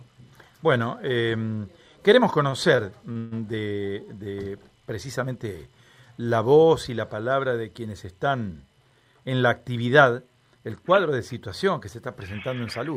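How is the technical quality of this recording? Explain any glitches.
The recording has two network-related glitches, one near the start and one toward the end.

Between 2.49 and 3.33 s the audio drags and stutters, catching four times as if it hesitates mid-flow. This is repeated stalls (stutter): packets reached the receiver late, so its jitter buffer kept running dry. Each time, the receiver stretched the last sound to bridge the wait, 220 ms in total, about a quarter of that stretch. The longest gap is 140 ms, where the held sound fades. No audio is actually lost, only delayed.

From 9.05 to 9.29 s the sound briefly runs fast, at about 112% speed, with the pitch unchanged, so it comes across as hurried rather than higher. This is a jitter buffer speed-up: the buffer held more audio than it wanted. To shed that extra delay, the receiver cut out several tiny pieces, each a pitch period or so long, removing roughly 40 ms in total.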